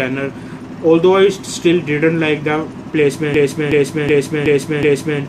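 At 3.34 s a system hang loop begins. The system froze, so one 0.37 s buffer repeats five times, a stutter at 2.69 Hz until 5.20 s.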